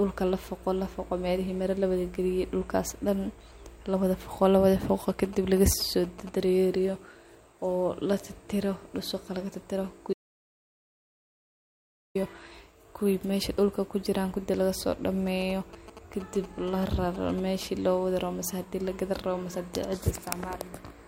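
From 5.10 to 6.29 s, GSM signalling bursts break into the speech. A nearby 2G phone is exchanging short control bursts with its network, and the audio circuit rectifies them. The result is a galloping dit-dit-dit of brief buzzes at 216.7 Hz. It sits roughly 15 dB below the speech. From 10.13 to 12.15 s, an audio dropout to silence removes about 2.02 s of speech. The sound cuts off mid-flow. The gap is silent, with no room tone at all. The input was likely lost, perhaps through a disconnected device or a failed link, while silence was still being written. From 15.27 to 17.63 s, the same GSM signalling bursts return. The same 216.7 Hz buzz gallops along at a similar level, this time for about 2.4 s.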